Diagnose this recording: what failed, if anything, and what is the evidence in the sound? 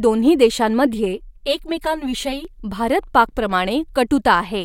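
Channel delay (comb filtering) at the driver or buffer stage: from 0.94 to 2.45 s the speech turns hollow and phasey. One channel lags around 5 ms, so the mono sum cancels at evenly spaced frequencies from roughly 100 Hz, showing on a spectrogram as fixed horizontal notch bands.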